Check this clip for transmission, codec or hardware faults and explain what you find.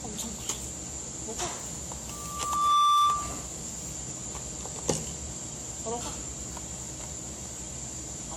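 Two faults are present: a hollow, smeared character across the whole clip, and a feedback squeal early on.

Generation loss runs throughout. The audio sounds swirly and hollow, with transients blurred and nothing above 18.5 kHz. The likely cause is repeated lossy re-encoding: the character fits AAC-LC at around 96 kbit/s decoded and re-encoded roughly seven times. Each pass quantises on a shifted frame grid, so noise and spectral gaps pile up beyond what one encode at that bitrate would leave.

A loudspeaker feedback squeal runs from 2.10 to 3.50 s. A single tone at 1.2 kHz swells up over roughly 0.7 s and holds at about 15 dB above the rest of the sound before it stops. A microphone was picking up a loudspeaker it was feeding, and at 1.2 kHz the loop gain exceeded one, so that frequency kept reinforcing itself.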